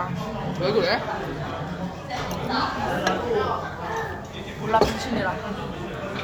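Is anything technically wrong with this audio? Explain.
No, nothing technically wrong here.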